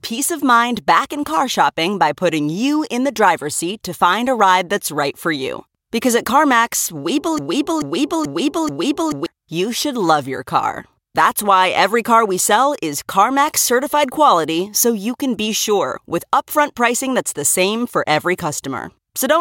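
A broken-record loop runs from 7.38 to 9.26 s in this speech recording. A 0.43 s fragment repeats exactly, back to back, four times before "you should love your". The likely cause is a stalled player or stream resending its last held piece, losing the audio due then.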